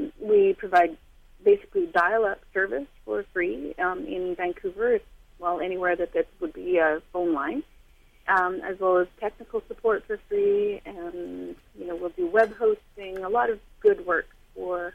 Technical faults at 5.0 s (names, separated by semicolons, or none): none